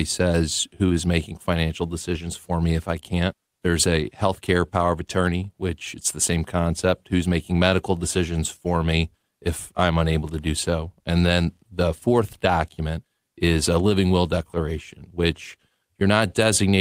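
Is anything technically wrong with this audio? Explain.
No, nothing is technically wrong with this audio.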